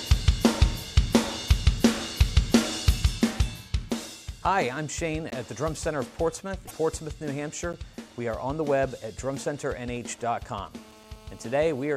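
A block of digital silence at 5.30 s lasts about 17 ms. The sound cuts out and returns with no fade, and the whole event is heard as a short hole.

Damaged data in a compressed stream appears from 6.64 to 6.72 s. Corrupted bytes make the decoder misread frames and lose sync while it hunts for the next valid header. The result is a brief disruption.

A second block of digital silence at 7.73 s, about 10 ms long, cuts out and back the same abrupt way. It is heard as a single click.

GSM signalling bursts run from 9.96 to 10.68 s, at roughly 25 dB below the signal. A nearby 2G phone is sending short groups of radio bursts, and the audio circuitry rectifies them into a galloping dit-dit-dit of brief 217 Hz buzzes.

GSM phone buzz follows from 10.74 to 11.94 s, about 26 dB below the signal. The phone is now in a call and transmits in bursts 217 times per second. The rectified pulses produce a steady, hard, raspy 217 Hz buzz, rich in harmonics and unrelated to the programme.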